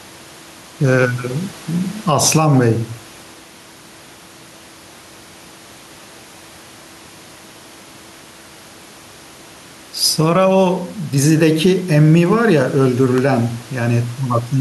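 Gain pumping runs through the whole speech clip. Loud and soft parts end up closer in level, and the sound is squashed. The swing is around 10 dB. The likely cause is input gain set too high, with a fast limiter clamping every loud sound. The room noise sits about 31 dB below the speech.

From 12.86 to 13.98 s come CD scratch ticks. Eight ticks land at a steady rate of about seven per second. The longest lasts about 1.5 ms. They point to a damaged disc area returning once per turn, beyond what error correction could repair.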